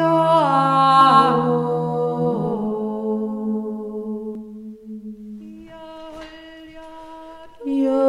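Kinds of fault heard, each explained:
Doubled audio track: from 1.01 s to 4.35 s a second full-band copy of the sound runs about a fifth of a second behind, at roughly equal level, with no decay or room colour, starting and stopping abruptly; likely a slower duplicate capture path mixed in.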